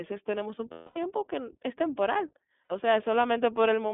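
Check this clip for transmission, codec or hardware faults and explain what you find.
Two faults are audible: the whole clip passes through the iLBC codec, and iLBC frames are lost twice.

iLBC codec, throughout: The speech has been squeezed into a narrow telephone band, roughly 200 Hz to 3.5 kHz, and each short frame's excitation is coded on its own. The damage is plain. Voices sound thin, slightly rough and synthetic, with the crisp top end of consonants missing. The 20 ms framing and the texture fit iLBC's 15.2 kbps mode.

Lost iLBC frames, 0.72 to 0.98 s and 2.64 to 2.72 s: Packets were lost, and the decoder filled the gaps by repeating the last pitch cycle mixed with noise. The first gap lasts about 240 ms, which fits twelve consecutive 20 ms frames. It is heard as a held, buzzy, breathy vowel that fades as the concealment runs on. The second gap, about 60 ms, is a shorter held, buzzy vowel. 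Because iLBC frames decode independently, the speech is right again almost at once after each gap.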